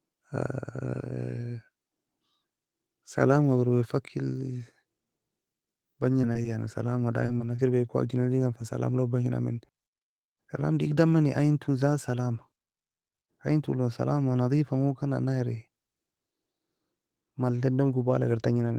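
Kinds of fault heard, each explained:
Repeated packet loss (robotic sound): between 6.21 and 7.60 s the speech breaks up in six short gaps, the longest 25 ms, each filled by extending the preceding sound. A spectrogram shows smeared, repeated harmonic slices with abrupt edges; the waveform shows looped, flattened stretches.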